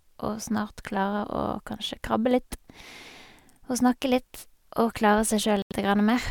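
At 5.62 s the speech drops into a Bluetooth stall: about 86 ms of silence before it resumes near 5.72 s, likely because interference delayed packets and the headphones' buffer emptied. A spectrogram shows a clean vertical gap; the waveform flatlines abruptly.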